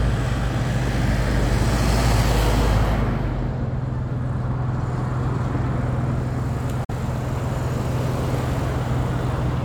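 A recording of sounds with one brief hole: at 6.84 s the audio fades to silence over about 8 ms and returns at 6.94 s, with the material that should have filled the gap simply missing rather than delayed. This is a digital broadcast dropout. The receiver lost the signal or rejected a corrupted frame and muted until valid data resumed. Roughly 43 ms of programme went missing, which fits the loss of a single frame.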